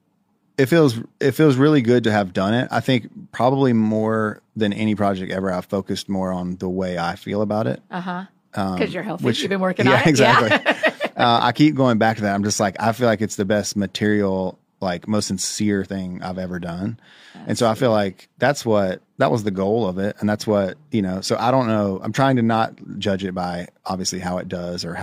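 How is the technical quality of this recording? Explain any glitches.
I hear no technical glitches in this speech recording.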